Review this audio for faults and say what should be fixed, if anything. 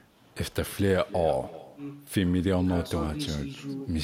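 Echo with no canceller runs through the whole speech clip: each phrase is followed roughly a third of a second later by a quieter, thinner copy, about 18 dB down. The far end's loudspeaker is feeding its microphone, and nothing subtracts that return path. On a spectrogram every syllable has a faint ghost shifted right by around 300 ms, and the waveform shows low-level bursts filling the gaps after each phrase. Enabling acoustic echo cancellation at the far end, or having that participant use a headset, would stop it.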